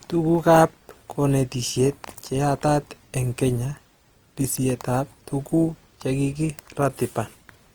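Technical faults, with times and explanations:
Throughout, Opus compression: the speech sounds plainly grainy and rough, with noisy texture filling the upper bands rather than the swirling spectral holes of MP3, and it still reaches 20.2 kHz; this likely comes from Opus music-mode coding, fitting a 24 kbps stream.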